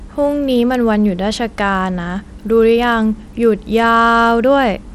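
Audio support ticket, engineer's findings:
Gritty, grainy noise riding on the speech throughout; treble thin and flickering, nothing above 17 kHz. Likely Bluetooth SBC compression: tight bit pool starves upper sub-bands, coarse quantisation in the rest. Plainly audible damage, consistent with a low bitrate around 96 kbps.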